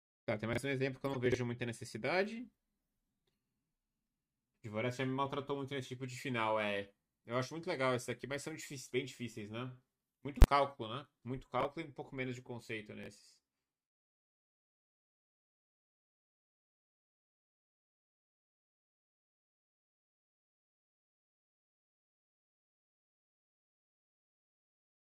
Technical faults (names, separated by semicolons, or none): chunks out of order; corrupt frame decoded; invalid numbers at full scale